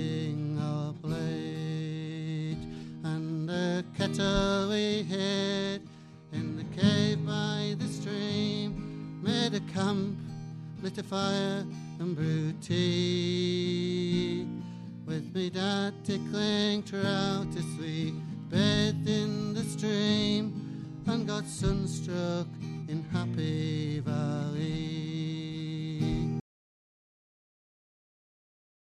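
An audio dropout to silence begins at 26.4 s and runs to the end of the clip, about 2.5 s in all. The sound stops abruptly mid-flow and is replaced by silence, with no room tone or noise floor left underneath. The likely cause is a loss of the input signal, such as a disconnected device, a failed link or an accidental mute, while recording carried on writing silence, so whatever followed is not captured.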